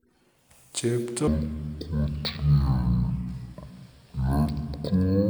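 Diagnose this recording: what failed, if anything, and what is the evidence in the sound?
Stereo read as mono from 1.27 s to 5.30 s, at sample-format conversion: interleaved left and right samples are read as one channel, so speech plays at half speed, an octave low.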